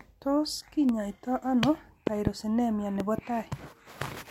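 A loud pop at 0.89 to 0.91 s sits roughly 10 dB above the speech. From 2.07 to 2.29 s two pops follow in quick succession, the stronger near 20 dB above it, and from 3.00 to 3.21 s another pair lands around 15 dB up. Each is likely a voltage pulse from a plug, switch, static or driver glitch, shaped into a thump by the circuits after it. The speech carries on unbroken beneath every pop, with no gap or skip as a dropout would leave.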